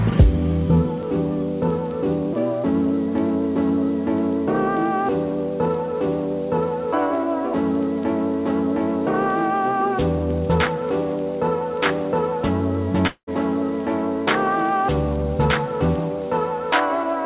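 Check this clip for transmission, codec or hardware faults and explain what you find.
One transmission fault: a long network dropout from 13.07 to 13.33 s. Packets likely stopped arriving, so the receiver stretched the last sound into a fading buzz for 0.2 s, then 0.09 s of silence, and the audio resumed with a stretch missing.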